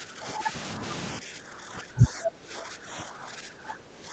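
Speech, with the level pulled down in two stretches: from the start to 0.54 s, dipping by roughly 10 dB, and from 1.19 s through to the end, dipping by roughly 15 dB. This is likely speech suppressed in double talk, where an echo canceller, unable to tell this talker from loudspeaker echo while the far side also spoke, attenuated everything. The whole clip is band-limited with nothing above 8 kHz, consistent with a call codec path.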